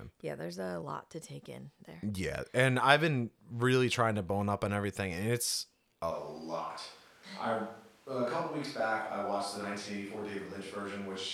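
From 6.13 s to the end the speech suddenly turns roomy and hollow, a few dB quieter, with more background noise, likely a switch to a distant microphone.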